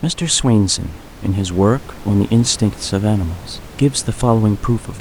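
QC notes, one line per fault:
No technical faults are present in the signal; the only background is the room noise picked up by the microphone, which sits about 20 dB below the speech.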